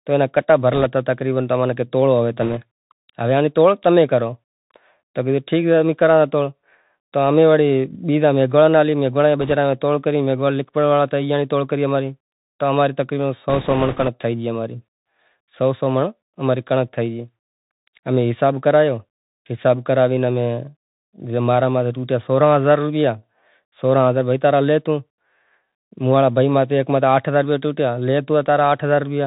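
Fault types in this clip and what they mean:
Bluetooth CVSD headset codec: the whole clip sounds like a headset link, cut off near 4 kHz, with scratchy s sounds and grainy hiss under the speech.
Bit errors on a Bluetooth voice link: flipped bits leave short rushing crackle, not clicks, near 0.74, 2.42 and 9.41 s, and longest from 13.5 to 14.1 s.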